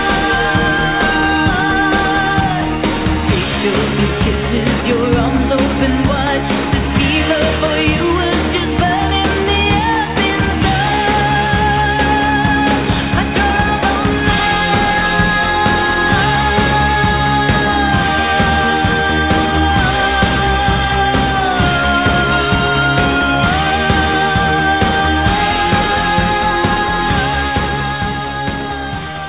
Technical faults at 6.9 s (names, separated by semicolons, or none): none